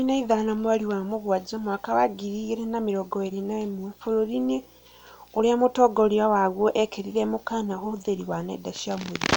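From the start to the end of the speech there's video or display buzz, where a screen or video cable has leaked into the audio path. You get a buzz at the 59.94 Hz field rate with hash on top, plus a thin 15.7 kHz line-rate whine, sitting roughly 35 dB under the voice.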